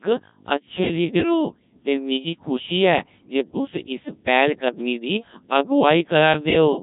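Speech runs through a Codec 2 vocoder for its whole length, robotic and buzzy from sine-wave resynthesis, which fits 1.3 kbit/s, unlike the watery smearing of low-bitrate waveform codecs.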